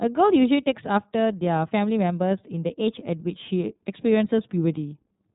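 iLBC codec compression runs throughout: nothing above 3.8 kHz survives, and independently coded 30 ms frames leave speech audibly rough and synthetic, fitting the 13.33 kbps mode.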